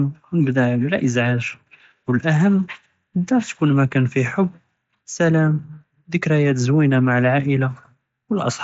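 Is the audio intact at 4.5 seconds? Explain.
Yes, the audio is intact at 4.5 seconds, with no fault at that moment.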